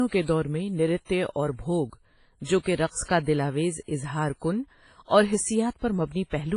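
Throughout the speech, the sound is washy and ringing, with nothing above 10.1 kHz and a hiss that breathes with the signal, likely heavy WMA compression at a low bitrate around 24 kbps. At 3.03 to 3.09 s, between "بھوَگ جو کہ رقص" and "کا دلآویز", pre-echo spreads about 52 ms of hiss ahead of an attack, softening it. At 5.79 to 5.82 s, just after "کُن اور", the same fault recurs, spreading noise about 35 ms early as the coarse quantisation fills the quiet gap.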